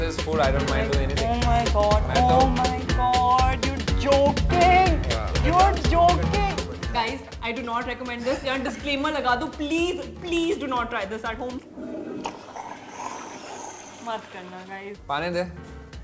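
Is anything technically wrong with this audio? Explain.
No, nothing here is technically wrong; it sounds like a normal call, with nothing above about 8 kHz, which fits a wideband codec such as G.722 doing its ordinary job.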